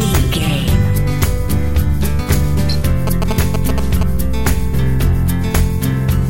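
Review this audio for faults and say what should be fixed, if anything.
GSM signalling bursts from 3.07 to 4.03 s: a nearby phone's short radio bursts are rectified by the audio circuit, giving galloping ticks and 217 Hz buzz just below the sound's level. Keep mobile phones away from the recording chain, or use shielded, filtered cabling and inputs.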